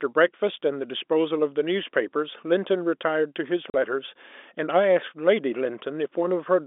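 Telephone-band speech carried over G.711, with a single dropout from packet loss filled with silence between 3.70 and 3.74 s. The 40 ms gap, which fits two lost 20 ms packets, was replaced by digital silence, so the sound stops dead at a hard edge and restarts just as abruptly.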